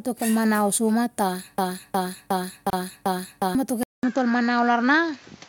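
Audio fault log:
1.58–3.55 s, broken-record loop: A 361 ms fragment of the speech plays five times back to back, each copy identical, so the delivery freezes into a stutter and whatever should have been said in those two seconds never arrives. This is likely a player, encoder or stream that stalled and kept resending the last fragment it held. Unlike a deliberate echo or a reverb tail, each repeat is the same length and full strength, and the loop ends abruptly rather than decaying.
2.70–2.73 s, gap at a join of encoded pieces: Just after "kel manau soima", the sound drops out for about 30 ms and then resumes exactly where it stopped, with edges softened by the codec. Two separately encoded pieces were joined without trimming, leaving the start-up delay and final-frame padding in place. The spacing fits pieces of about 6 s. Unlike a dropout from a lost packet, nothing is missing or repeated; the silence is simply inserted into continuous audio.
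3.83 s to end, input switched to a poorer device: About 200 ms of silence opens, and the speech then returns duller and boxier, with nothing above 7.6 kHz and a new background noise roughly 30 dB below the speech. The level stays about the same. This is likely the system changing to another microphone or a headset call profile mid-recording. Unlike a low-pass filter or codec bandwidth drop, the switch also changes the noise floor and tone at a single moment.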